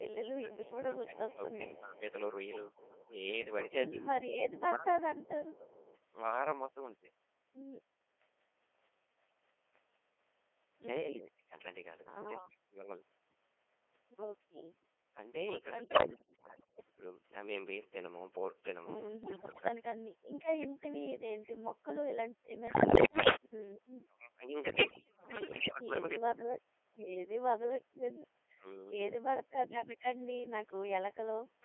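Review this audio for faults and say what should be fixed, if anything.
Codec 2 vocoder processing runs through the whole speech clip. The decoder rebuilds the voice from sine waves using only pitch, voicing, energy and a spectral envelope, so the speech is buzzy and robotic within a 300 Hz to 3.4 kHz band. The heavy damage points to a rate around 2.4 kbit/s. Unlike bit errors, this colouring stays constant. A higher-rate or waveform codec would avoid it.

An echo leak runs from 0.00 to 5.98 s. A faint delayed copy of the far talker returns about 264 ms late and about 25 dB below the speech. The likely cause is a loudspeaker echo canceller that left residue. A separate trailing copy distinguishes it from room reverberation. Better echo cancellation or using a headset would prevent it.

Speech suppressed in double talk appears between 0.4 and 5.73 s. The near talker dips by as much as about 20 dB, for roughly 3 s in total, while the other side speaks. 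It is likely that the canceller could not separate the near voice from the echo and turned both down. These are level dips, not added copies, which separates it from the echo leak. A double-talk-robust canceller would prevent it.

Bit errors on digital voice radio occur at 15.84–16.90, 19.24–19.68, 22.68–23.36 and 24.70–25.75 s. Heavy bit corruption reaches the vocoder frames, so pitch, level and timbre jump into warbles and bleeps. These bursts are sudden and erratic, while the codec's buzz is steady. Staying inside coverage or adding stronger error protection would prevent them.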